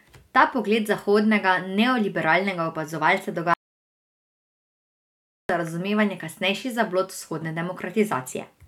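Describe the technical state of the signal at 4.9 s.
At 4.9 s the signal sits inside an audio dropout to silence running from 3.54 to 5.49 s, nearly 2 s of speech lost, likely from the input cutting out while recording continued. The waveform is a flat line, and the spectrogram a blank band with no room tone.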